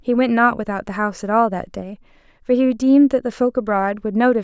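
Nothing in this short speech recording stood out as a technical problem on listening.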